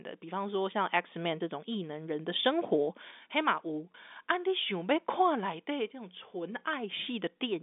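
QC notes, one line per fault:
3.92–3.94 s, packet loss with pitch repetition: about 20 ms is missing, consistent with one lost packet. The receiver fills it by repeating the last pitch period, so the speech briefly holds with a slightly buzzy sameness inside the 250 Hz–3.6 kHz G.711 line band.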